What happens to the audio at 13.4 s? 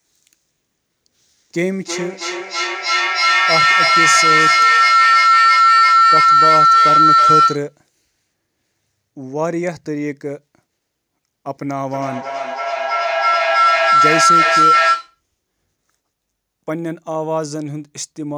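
At 13.4 s a feedback howl is under way, spanning 11.85 to 15.21 s. Loudspeaker sound re-enters a microphone, gaining level each trip. It narrows to a tone near 1.5 kHz. The loop repeats roughly every 0.3 s, and the howl peaks about 9 dB above the speech.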